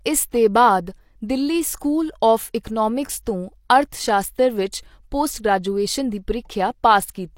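Pre-echo appears from 1.79 to 1.81 s. The codec smeared quantisation noise about 20 ms ahead of a sharp attack. A brief hiss precedes it, softening the onset.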